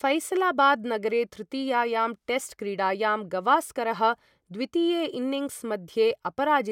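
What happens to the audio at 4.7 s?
Nothing goes wrong at 4.7 s; the speech there is intact, with no dropout, click, distortion or other fault.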